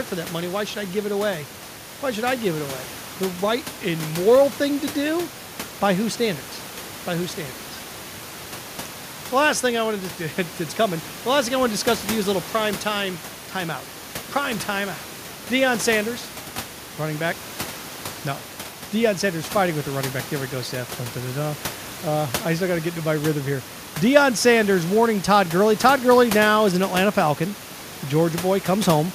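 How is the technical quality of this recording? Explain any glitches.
No glitches to report: the speech runs without technical faults, with only the room's own background noise sitting about 17 dB beneath it.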